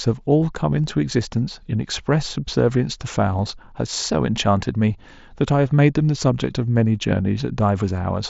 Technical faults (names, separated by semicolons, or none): none